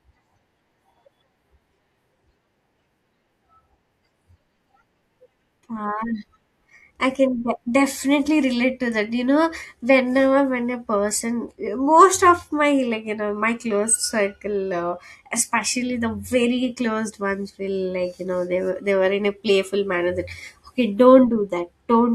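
No technical faults can be heard anywhere in the recording. The speech continues without any break or disturbance from the audio chain.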